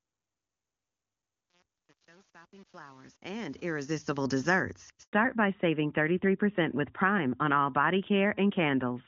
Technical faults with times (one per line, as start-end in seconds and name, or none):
0.00-4.16 truncation distortion on a fade
5.03-5.13 handover gap
5.13-9.07 fallback to narrowband